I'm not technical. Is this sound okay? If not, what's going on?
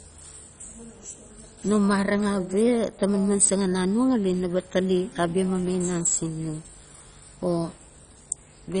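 No. The speech sounds dull and gurgly from start to finish, as if heard through a cheap digital radio. This is heavy MP2 compression, likely from saving the file at too low a quality. The format splits sound into narrow slices and drops the upper ones, so nothing above about 10.4 kHz survives. Unlike a simple muffled recording, the remaining sound also has a grainy, bubbling roughness that comes and goes.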